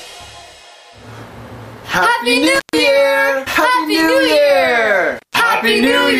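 At 2.55 to 2.78 s and again at 5.17 to 5.35 s, an intermittent contact breaks the signal path. A loose cable or plug opens for about 136 ms and then 157 ms, so the sound drops out, with crackle as the connection breaks and remakes.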